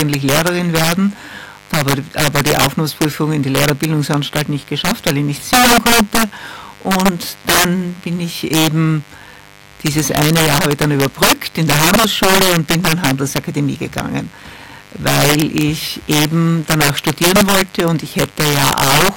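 Mains buzz runs throughout, a steady raspy 50 Hz buzz with harmonics reaching several kHz, sitting roughly 30 dB below the sound, from switching spikes leaking in twice per mains cycle. Integer overflow is also present throughout, as violent cracks on loud peaks: the signal is driven about 11 dB too hot, so a few percent of samples wrap to the opposite sign instead of being limited.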